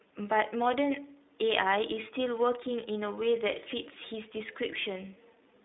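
Right through the speech you can hear the iLBC codec at work: nothing above about 3.8 kHz, a thin 250 Hz to 3.7 kHz line band, and plainly audible roughness from each 20 ms frame being coded on its own, which fits the 15.2 kbps mode.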